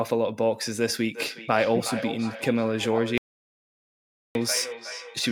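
From 1.14 s right through to the end there's feedback echo between two devices: the speech keeps coming back roughly every 0.4 s, thinner and ringier, peaking at about 10 dB below the direct speech. One device is playing the other's feed and its mic is sending it back round the loop.

Then at 3.18 s everything drops to dead digital silence, with no room tone at all, until 4.35 s. That's an audio dropout to silence, about 1.17 s of sound gone, most likely an input lost mid-recording while silence kept being written.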